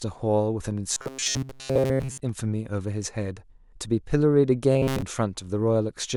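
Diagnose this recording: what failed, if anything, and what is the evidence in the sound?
Robotic sound from repeated short buffers affects the speech from 0.93 to 2.20 s and again from 4.72 to 5.02 s. In both spans the voice turns into a rigid, metallic buzz at 133 Hz that follows the speech only loosely. The fault likely sits at the driver or buffer stage. Audio arrives too seldom, so a segment of about 7.5 ms is replayed to fill the gaps. Repeated material makes up roughly 70% of each span and imposes its own fixed pitch.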